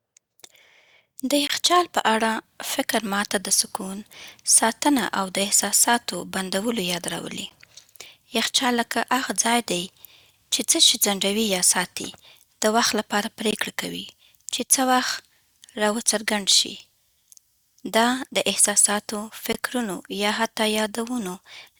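At 1.47 to 1.50 s, then 7.50, 13.51 and 19.53 s, the speech breaks for 13 to 22 ms of hard-edged silence: a gap between stream segments, recurring every 6 s at segment boundaries. Unlike a dropout, nothing is missing; the speech simply resumes slightly later.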